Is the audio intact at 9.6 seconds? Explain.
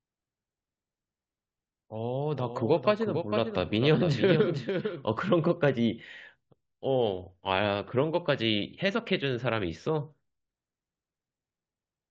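Yes, the speech at 9.6 seconds plays through cleanly, with no dropout, click, distortion or other fault at that point.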